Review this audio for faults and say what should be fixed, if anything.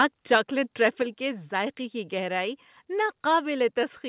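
The speech level drops suddenly twice: by about 4 dB at 1.02 s, and by about 1 dB at 3.06 s, right after "کی گہرائی". Voice and background fall together, in a single step each time, which is the signature of a microphone volume stepped down, likely by the call software's automatic input-gain control reacting to a loud input. On a waveform the envelope shrinks abruptly at each point and stays lower. On a spectrogram every band dims at once, leaving a faint vertical boundary. The second step is much subtler. Disabling automatic microphone gain adjustment, or setting the input level low enough that the software never needs to intervene, would prevent these steps. The narrowband call path, with nothing above 4 kHz as expected from G.711, is working as designed.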